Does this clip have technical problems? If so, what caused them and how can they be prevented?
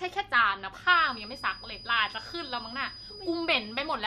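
Yes. From 0.81 s to the end, a thin feedback whistle at 4.9 kHz sits well below the speech. It is likely a loudspeaker-to-microphone loop held just short of runaway, showing on a spectrogram as a steady horizontal line. Lowering monitor gain, repositioning the microphone, or notching 4.9 kHz prevents it.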